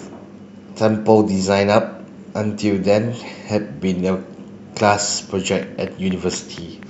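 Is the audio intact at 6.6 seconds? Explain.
No, 6.6 s falls inside a train of clicks that runs from about 5.63 to 6.84 s. You get a steady ticking of roughly four clicks a second, around seven in all, each much the same shape and poking up to around 5 dB above the speech. That regular, repeating pulse is most likely interference from nearby gear or a faulty connection or power supply, injecting the same spike over and over on top of the sound.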